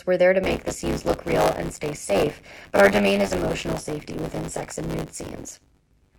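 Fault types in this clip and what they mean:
Buffer tearing: the ring buffer's write and read pointers cross every period, splicing in about a fifth of stale audio and causing a 100 Hz robotic rattle from 0.43 s.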